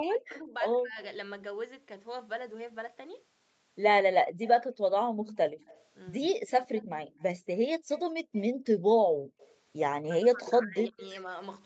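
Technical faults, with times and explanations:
0.0–1.0 s and 10.01–11.0 s, speech suppressed in double talk: the speech sags by up to about 40 dB over roughly 0.7 s, likely because the echo canceller ducked both overlapping talkers. The waveform shows pinched, broken envelopes.
4.15–5.64 s, 7.06–7.19 s and 8.52–9.39 s, background gated by the echo canceller: the room tone drops by about 40 dB, about 19 dB in the brief middle dip, while the far end plays. The spectrogram shows dark gaps in the noise floor.
4.43–8.39 s, 9.39–9.53 s and 10.78–11.03 s, echo leak: a faint copy trails the sound by 114 ms, about 25 dB down, and about 35 dB down at 9.4 s. The likely cause is residual loudspeaker pickup. On a spectrogram this appears as faint shifted ghost harmonics.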